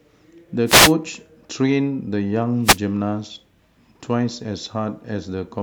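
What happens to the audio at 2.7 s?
At 2.7 s the radio link of the wireless microphone briefly fades, producing a wireless microphone noise hit from 2.63 to 2.78 s. Reflected copies of the FM signal cancel at the receiver, so its own noise rises. For about 0.15 s a short swish of static is heard over the speech, then the clean signal returns.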